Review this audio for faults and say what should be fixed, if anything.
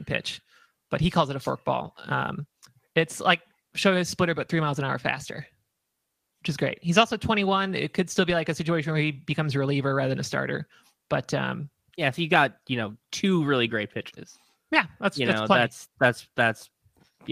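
Between 1.79 and 1.89 s, just after "it a", there is a lost packet rebuilt from error correction. About 60 ms of speech turns rougher and noisier but never drops out, which fits three 20 ms frames replayed from the low-bitrate copies carried in the following packets. The absence of a gap or a smeared, repeated stretch sets it apart from ordinary packet-loss concealment. Reducing network loss or jitter on that link would leave the decoder no frames to rebuild.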